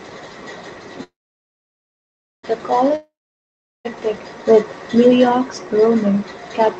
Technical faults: call audio freeze; long network dropout

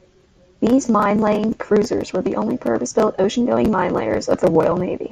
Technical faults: none

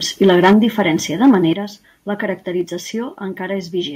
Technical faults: microphone overload; microphone volume stepped down

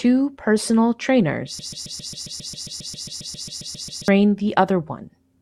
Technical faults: broken-record loop

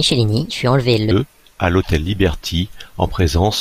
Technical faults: section at the wrong speed

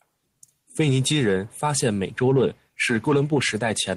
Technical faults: none

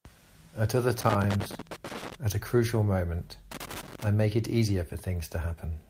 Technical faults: loose connector crackle

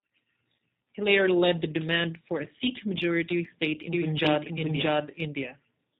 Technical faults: G.729 codec; doubled audio track

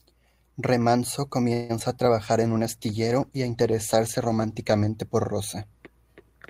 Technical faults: clock drift buffer slips; call audio freeze; short concealed packet loss; call bitrate drop

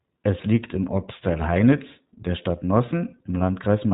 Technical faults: iLBC codec

